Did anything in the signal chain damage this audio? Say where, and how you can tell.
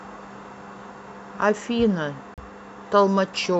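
Yes: a CD skip at playback, 2.34 to 2.38 s. A mute of roughly 40 ms, then speech resumes elsewhere on the disc, seen as a gap with a discontinuous waveform.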